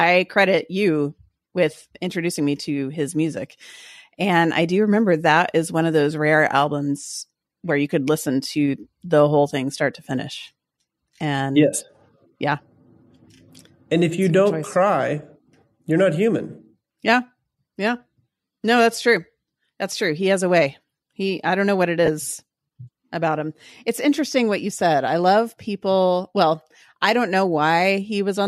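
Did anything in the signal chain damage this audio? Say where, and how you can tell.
Yes: lost LE Audio frames on the Bluetooth link at 22.06 s, after "don't know what it". The decoder filled about 20 ms by reusing the last spectrum with random signs, so harmonics smear into a brief noisy blur on a spectrogram.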